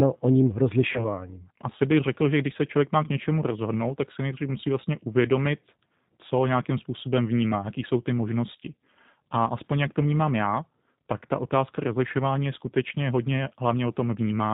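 G.729 codec damage runs through the whole of this speech recording. Nothing above 4 kHz survives, and the voice sounds plainly rough and synthetic, which fits speech rebuilt at 8 kbit/s from a vocal tract filter, a pitch predictor and a few pulses per frame. VoIP packet loss concealed by the speech codec follows at 0.93 to 1.05 s, just after "o ním": a 20 ms gap, consistent with a single lost packet, was filled by extrapolating the last pitch and filter at falling gain, and the damage lingers as a weak, distorted voice for tens of milliseconds or more while later frames recover.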